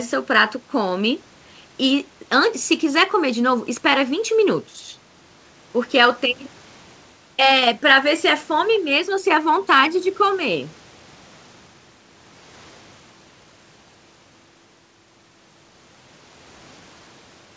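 Nothing goes wrong anywhere in this speech, and the call path behaves as a call should, with the top end stopping at 8 kHz in a way that fits a wideband codec like G.722.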